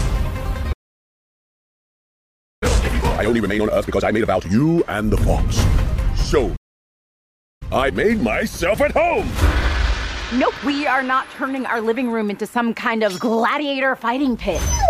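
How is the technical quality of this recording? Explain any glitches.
The recording has two clear playback interruptions, each followed by a stretch where the audio is rushed to make up lost time.

Playback stall: the sound cuts out mid-flow at 0.72 s and stays silent until 2.63 s, about 1.9 s, then again from 6.56 s to 7.62 s, about 1.05 s. The likely cause is the player running short of buffered data or having its output thread blocked, so nothing reaches the speaker until it recovers. On a waveform each gap is a flat line. On a spectrogram it shows as an empty vertical band that starts and ends abruptly.

Time-compressed catch-up: right after each stall the player works through its backlog by cutting out short slices and cross-fading the remainder. From 2.63 s to 4.51 s the audio runs at twice normal speed, and from 7.62 s to 10.62 s at 1.25 times. Pitch stays where it was, but the sound is hurried. 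A spectrogram shows events packed closer together in time, with no upward shift in frequency.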